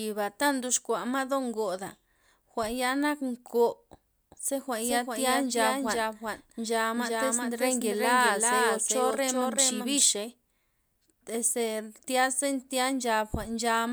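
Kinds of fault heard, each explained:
Doubled audio track: from 4.31 s to 10.03 s a second full-band copy of the speech runs roughly 0.4 s behind the original and a few decibels quieter, most likely because the signal reached the mix a second time through a slower path. Unlike an echo or reverb, the trailing copy has no decay and no room colour, and it cuts in and out abruptly at those times.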